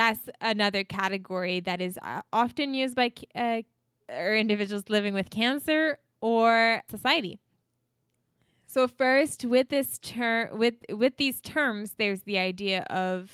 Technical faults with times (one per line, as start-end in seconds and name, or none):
none